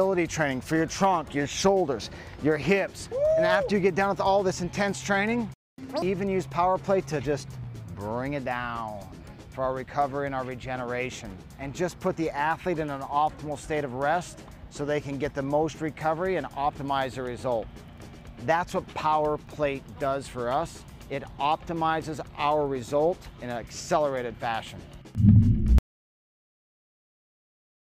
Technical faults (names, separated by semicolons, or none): playback stall; catch-up at higher speed; audio dropout to silence